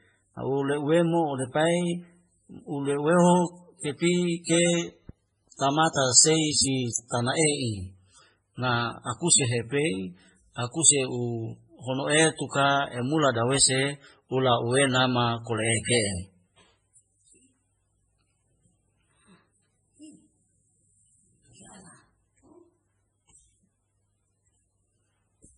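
Transcoding between lossy codecs runs through the whole speech clip. The sound carries two layers of damage at once: smeared, watery artefacts typical of a very low-bitrate MP3, around 16 kbit/s, overlaid with the different swirling character of a second codec that fits WMA 1 at about 64 kbit/s. The likely cause is a re-encode: the second codec spent its bits reproducing the first codec's errors while adding its own. Nothing survives above 10.4 kHz, so the top end sounds dull.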